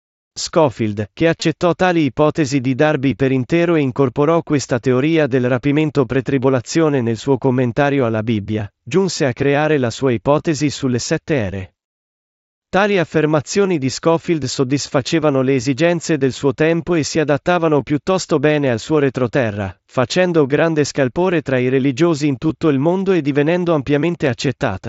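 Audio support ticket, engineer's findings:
Concealed Bluetooth headset packet loss, two events. 1.40 s, just before "tali ipotesi di": brief buzzy smear lasting 15 ms, fits two lost frames. The receiver bridged the gap by repeating the best-matching stretch of recent waveform. 24.26 s, just after "il mondo e divenendo": shorter glitch of 7.5 ms, fits one lost frame. Nearly hidden by the concealment. Probable component: the headset-to-phone radio link, carried over the wideband mSBC codec with the band capped at 8 kHz.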